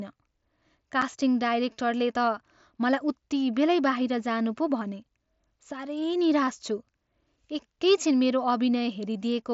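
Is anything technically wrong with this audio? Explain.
Yes, at about 1.02 s the speech has an unconcealed Bluetooth headset packet loss. A single voice packet between the headset and phone went missing and was never patched over, so silence or an idle pattern filled its slot instead of an estimate of the missing speech. The result is a hole of about 7.5 ms with hard edges in the speech. Its length fits one lost packet on the wideband mSBC headset link.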